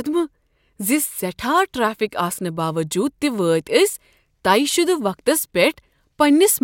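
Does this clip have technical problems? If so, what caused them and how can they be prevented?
No, there's nothing here that needs fixing, so there's no cause to track down and nothing to prevent.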